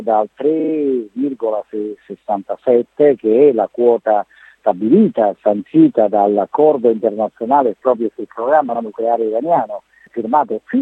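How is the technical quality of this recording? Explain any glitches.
Two brief stutters break the flow. From 0.59 to 0.72 s a 42.7 ms slice of sound plays three extra times, and at 8.74 to 8.80 s a 64 ms slice plays once more. These are repeated frames: a short run of compressed frames, about two in the first case and three in the second, was written or delivered more than once, so the decoder plays the same audio again. The repeats add 128 ms and 64 ms to the running time.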